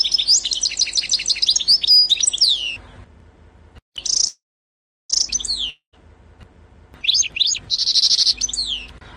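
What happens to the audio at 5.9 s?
At 5.9 s the audio is inside a long network dropout running from about 5.70 to 5.96 s, most likely caused by a stretch of audio that never reached the receiver, so about 240 ms of the original was lost. To cover the gap, the receiver stretched the last sound it had into a fading buzz or hiss, which decays to silence for its final 110 ms. The sound then resumes, with the missing portion gone.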